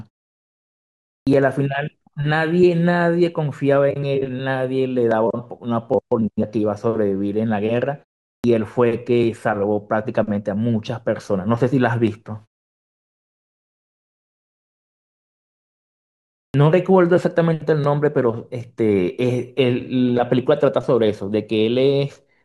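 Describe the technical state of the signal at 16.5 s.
At 16.5 s the speech comes back after a pause of about 4.1 s, and the first 41 ms are missing, from 16.5 to 16.54 s. This is a clipped start after a pause. The output path went idle during the silence and did not wake or relock fast enough, so the onset is cut off and the speech begins abruptly, with no leading sound.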